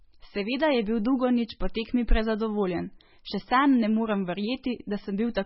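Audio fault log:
Throughout, MP3 compression: the speech has nothing above 5.6 kHz, so s and t sounds come out dull and lispy, and the remaining band is heavily damaged, with a watery, swirling texture and metallic chirps on sibilants. That points to a lossy encoder likely starved of bits, which fits a very low rate around 16 kbps. It drops the treble at a fixed cutoff and zeroes quieter frequency lines that flicker on and off between frames.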